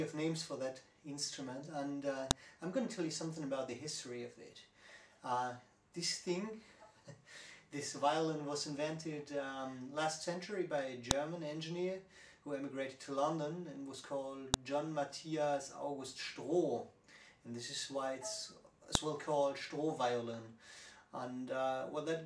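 Four sharp, loud clicks occur at 2.31, 11.11, 14.54 and 18.95 s, each lasting only a couple of milliseconds and standing out regardless of what the surrounding audio is doing. This is a file header played as audio: the recording appears to be separate WAV pieces joined or streamed without stripping their headers, so at each join the header's bytes are read as sample values, producing an abrupt snap at the start of every piece.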